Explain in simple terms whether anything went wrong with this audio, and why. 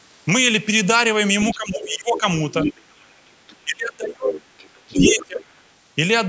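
Yes, two things go wrong here, and they're tangled together.

First, the other side's voice leaking through. A second voice sneaks in at 1.4 to 1.55 s, 1.92 to 2.2 s, 2.61 to 3.63 s, 4.57 to 5.26 s and briefly around 5.6 s. It starts faint but gets louder, and by 4.57 s it's as loud as the main talker. The likely cause is the talker's loudspeaker bleeding into the mic, with the echo canceller failing to scrub it out.

Second, speech suppressed in double talk. At 1.54 to 2.25 s, 3.64 to 4.5 s and 4.87 to 5.53 s, the main talker's voice drops away, most heavily in the middle stretch, where it nearly disappears. Both people were likely talking at once, and the canceller couldn't tell them apart, so it turned everything down.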